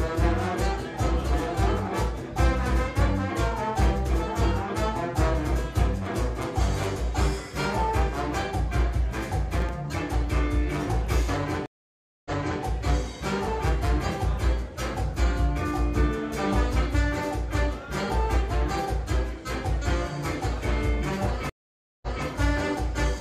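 Processor overload crackle from 9.54 to 9.72 s is a short gritty tear across the audio. The processor fell behind and missed several consecutive buffer deadlines, which fits buffers of around 5 ms with about five of them dropped. Each missed buffer came out as a tiny hard-edged hole of silence, and the run of holes is heard as crackle that stops once the load eases. A stream reconnect from 11.66 to 12.63 s cuts the sound out for 594 ms. When it returns, it picks up 372 ms earlier than where it broke off, so a short stretch is heard twice. This is the player losing its connection, reconnecting and starting a fresh decoder partway through a stream that the server resent from slightly back. A second stream reconnect from 21.50 to 22.25 s works the same way, with 526 ms of silence followed by a restart 232 ms earlier, repeating that fragment.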